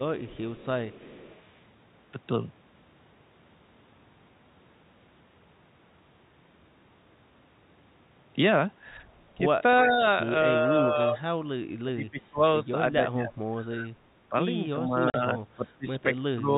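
From 0.2 to 1.47 s a faint delayed copy of the speech trails the talker by 334 ms, well below the main voice. This is an echo leak, likely from a far-end loudspeaker whose echo canceller let part of the returning signal through. It returns more strongly, at only about 15 dB down, from 9.75 to 9.93 s.

Overlapping the end of that, speech suppressed in double talk begins. The talker's level dips slightly from 9.88 to 10.03 s, then sinks much deeper from 10.66 to 11.26 s, from 11.78 to 14.34 s (as much as 25 dB at its lowest), and from 14.72 s to the end. The cause is likely an echo canceller that, with both sides talking, could not tell the local voice from the echo and turned both down.

Inside that last stretch, at 15.1 to 15.14 s, a 40 ms hole of dead silence with hard edges cuts into the audio. This is packet loss filled with silence: the receiver played nothing for the missing audio, a gap that fits two 20 ms packets. 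All of this sits within the G.711 telephone band, which stops at 4 kHz.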